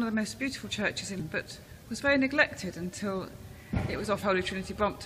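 Around 1.20 to 1.22 s, and again at 4.22 s, there's a quick blip from damaged data in the compressed stream. Bad bytes throw the decoder off, so it mangles those frames and has to hunt for the next clean frame header before it locks back on.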